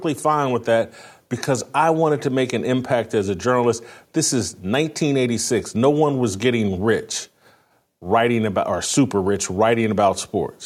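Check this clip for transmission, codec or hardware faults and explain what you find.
Nothing turns up here: the speech comes through without any transmission, codec or hardware trouble worth pointing to.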